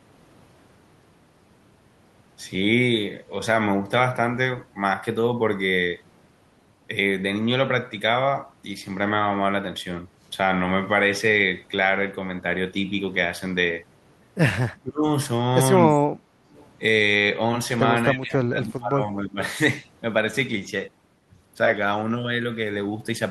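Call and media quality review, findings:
Speech suppressed in double talk at 14.81–15.07 s (deep dip, about 25 dB), 15.89–15.95 s (slight, about 5 dB) and 18.14–19.4 s (about 25 dB). Waveform envelope collapses. Likely echo canceller ducking the near talker against far-end activity.

Background gated by the echo canceller, 16.23–16.5 s, room sound drops about 6 dB then recovers. Waveform shows a brief notch in the noise floor, spectrogram a faint vertical gap across the broadband background. Canceller clamping the mic while the loudspeaker plays.

Echo leak, 16.53–16.67 s, faint delayed copy of the voice arriving 288 ms late, roughly 30 dB below speech. Spectrogram shows weak repeated harmonic traces offset in time, barely visible on the waveform. Likely residual loudspeaker echo slipping past the loudspeaker side's canceller.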